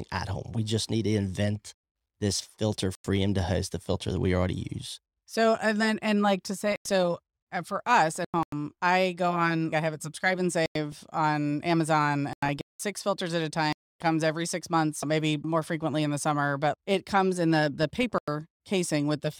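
At 1.56–1.84, 2.95–3.22, 6.72–6.91, 8.14–8.52, 10.66–10.98, 12.33–12.80, 13.73–14.02 and 17.83–18.28 s the speech drops out abruptly: corrupt frames muted. The decoder rejected damaged frames and silence replaced them, leaving sharp-edged blank columns on a spectrogram and flat-line gaps in the waveform, with timing kept.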